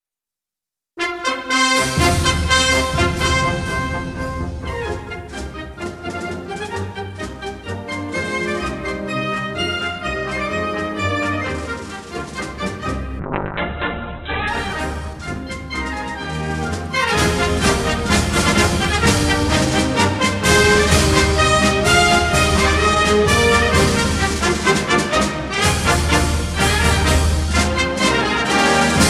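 At 13.21 s the audio hits a call bitrate drop lasting until 14.55 s. The connection's bandwidth estimate fell, so the encoder was told to spend far fewer bits. The sound turns coarse and watery. The top end vanishes as the audio band narrows from 20 kHz to 4 kHz, leaving a muffled, phone-like tone. The worst stretch holds for about 1.28 s, which fits a fall from about 128 kbps to about 7 kbps. Full quality then returns.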